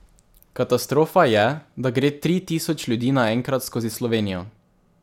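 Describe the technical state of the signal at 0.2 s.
At 0.2 s the speech signal is intact, with no fault present at that moment.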